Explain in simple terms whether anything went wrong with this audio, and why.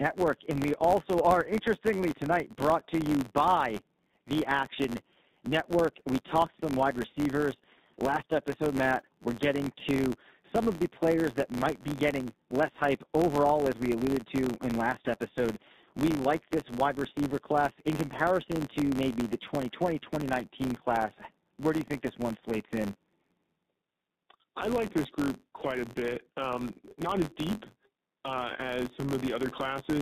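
AMR narrowband mobile codec, throughout: the speech went through an old phone codec squeezed hard, so everything above 4 kHz is gone and voices sound buzzy and synthetic.

Filter restarted on every block, also throughout: a filter wiped its memory every 512 samples, adding a tiny click each time, heard as a steady buzz near 94 Hz.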